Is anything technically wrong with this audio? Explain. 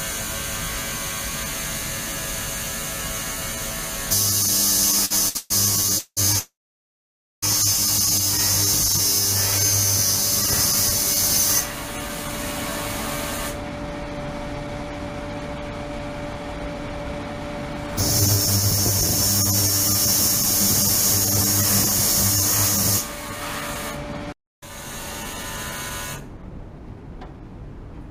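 Yes, there's a cluster of delivery problems around 5 to 7.4 s, and two stretches later on that run fast.

Short stalls from a late packet hit at 5.05 to 5.13 s and 5.29 to 5.37 s. A packet showed up late, the jitter buffer ran dry, and the receiver held the last sound for 52 ms and then 64 ms. You hear a brief stretched, slightly buzzy hold, with nothing actually lost.

Then come call audio freezes at 5.37 to 5.52 s, 5.98 to 6.19 s and 6.39 to 7.44 s. They're likely from packets held up in transit. Each time the last sound is carried on as a fading buzz. The last one is about a second long and sits almost entirely in silence. The audio picks up where it left off, so it's a gap inserted rather than anything cut.

Jitter buffer speed-up runs from 12.08 to 17.92 s and again from 23.22 to 27.40 s. Once the backlog arrived, the receiver trimmed small pitch-period slices over and over to pull the delay back down. 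Playback runs at 110% with the pitch unchanged, dropping around 0.7 s and roughly 0.4 s in total. It comes across as hurried.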